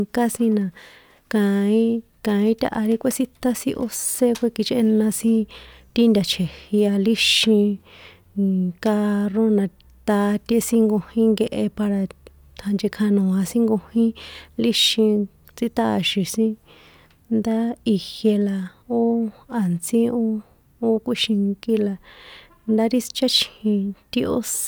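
Speech recording with no audible technical faults anywhere.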